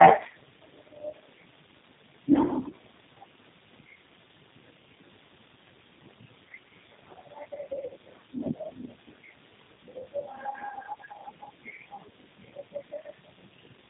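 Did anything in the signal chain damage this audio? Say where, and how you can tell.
Yes. Throughout, the speech sounds rough, muffled and warbly, with nothing above 3.8 kHz. This is tandem speech coding at the codec stage: iLBC, AMR-NB 5.15 kbit/s, GSM full rate and G.729A in series over G.711 links, each re-coding the previous codec's already degraded output.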